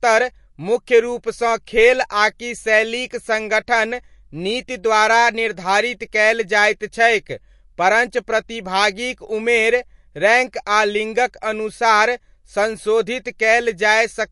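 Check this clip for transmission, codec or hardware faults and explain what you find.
One fault runs through the whole clip: the speech carries plainly audible MP3 compression damage, likely from encoding at a low bitrate, which fits roughly 48 kbps. Short of bits, the encoder removed everything above 11.3 kHz and switched weak frequency lines on and off between frames, so the treble sounds dull and the speech takes on a watery, swirling quality.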